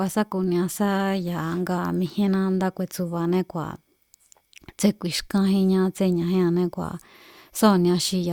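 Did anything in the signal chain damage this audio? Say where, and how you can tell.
No, nothing in the signal chain has audibly damaged this speech recording, and no stage from capture through playback has left a detectable mark on it.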